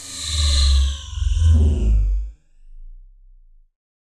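Two devices appear to run on slightly different clocks, a mismatch of a couple of hundred parts per million, likely causing clock drift buffer slips. About four regular clicks fall every 1.03 s between 0.68 and 3.78 s, each where a handful of samples is dropped or repeated.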